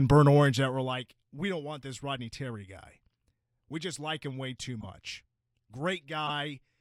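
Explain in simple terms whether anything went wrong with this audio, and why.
Yes, two things went wrong.

From 0.3 to 0.92 s, just before "we don't want this", the level drops sharply in small jumps, about fifty a second, instead of gliding down. Each jump clicks, so you hear zipper noise: a fine ticking riding on the speech.

At 4.80 to 4.85 s, right after "like him way too", and again at 6.27 to 6.30 s, a corrupt frame decoded: damaged compressed data was played anyway, giving a brief squeak or blip. The first hit spans a few frames, the second roughly one. These are single bursts, not steady ticking.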